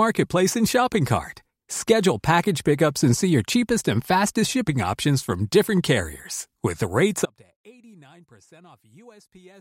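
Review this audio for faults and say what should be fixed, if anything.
The signal path likely lost its feed at 7.26 s while the downstream chain stayed live, producing an audio dropout to a faint residue that runs to the end of the clip. The speech cuts out abruptly rather than fading or pausing, and what remains is faint sound roughly 30 dB below the normal signal level. Those last couple of seconds need re-recording or replacing from a backup take. To prevent this, secure the source connection and monitor levels throughout the take.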